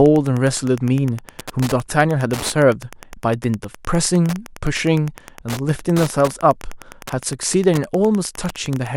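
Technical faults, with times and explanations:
Throughout, Wi-Fi interference: a nearby radio's beacon every 102.4 ms is rectified by the audio circuit, giving steady ticking about ten times a second, well below the speech.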